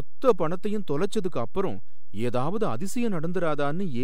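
Nothing in the speech itself gives it away, yet a DC offset runs throughout: the entire waveform sits displaced from zero by a fixed amount, about -22 dBFS, which eats into headroom and registers as constant energy at the lowest end of the spectrum.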